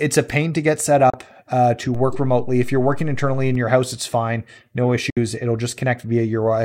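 Speech, with two digital broadcast dropouts and one DC step. At 1.10 to 1.14 s, between "pain to get set" and "uh to", the audio fades out over about 3 ms and stays silent for 32 ms, which fits a single lost frame muted by the receiver. A second dropout at 5.10 to 5.17 s, just after "house it's fine no", mutes 64 ms, consistent with two consecutive lost frames. At 1.95 s, after "uh to", the waveform's zero line jumps, producing a low thump while the speech continues unchanged. The offset lasts until about 3.55 s, just before "your house it's fine".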